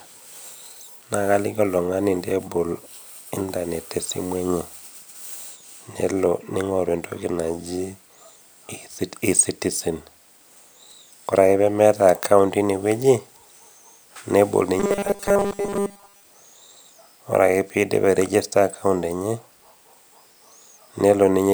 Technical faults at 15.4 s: robotic sound from repeated short buffers

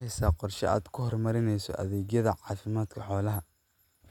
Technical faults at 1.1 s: none

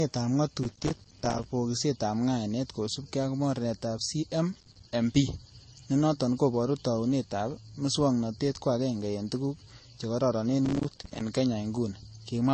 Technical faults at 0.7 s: transcoding between lossy codecs; processor overload crackle

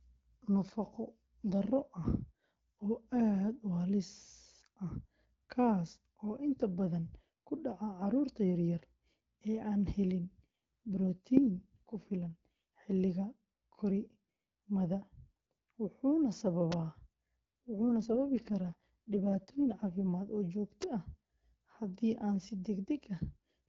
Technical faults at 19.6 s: AMR rate drop

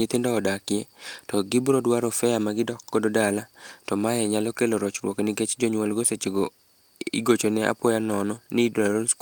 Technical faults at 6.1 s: none

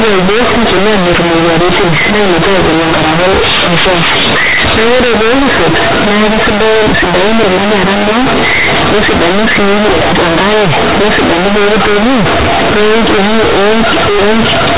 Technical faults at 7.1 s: companded audio read as linear

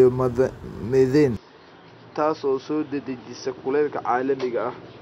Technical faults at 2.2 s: input switched to a poorer device

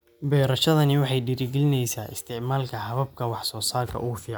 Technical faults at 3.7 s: none

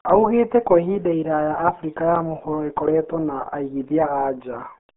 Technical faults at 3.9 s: RealAudio 14.4 codec

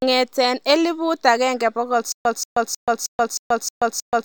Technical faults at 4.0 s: stutter with silent gaps

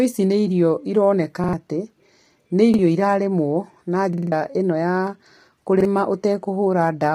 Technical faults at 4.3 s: low-delay AAC compression; repeated buffer

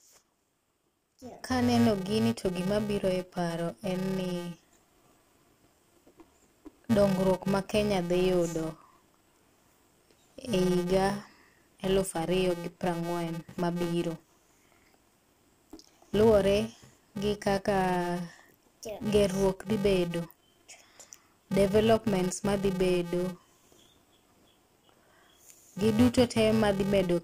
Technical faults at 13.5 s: filter restarted on every block

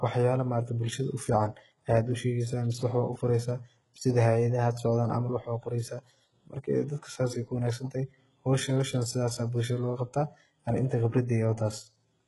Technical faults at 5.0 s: HE-AAC compression

